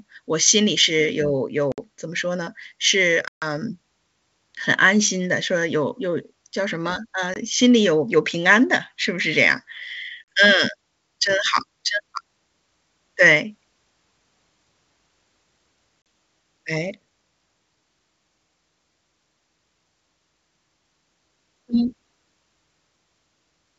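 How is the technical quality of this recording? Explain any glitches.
Five dropouts from packet loss on an ADPCM call break up the speech, at 1.72–1.79 s, 3.28–3.45 s, 7.34–7.37 s, 10.27 s and 16.02–16.06 s. Each gap is silence lasting 20 to 140 ms, the longest at 3.28 s spanning several packets. Speech then resumes slightly distorted, because the receiver's adaptive predictor and step size have drifted from the sender's and need some tens of milliseconds to realign. On a waveform each gap is a flat, sharp-edged hole. A spectrogram shows a blank vertical band. The wideband coding underneath carries speech cleanly up to about 7 kHz, which fits full-rate G.722.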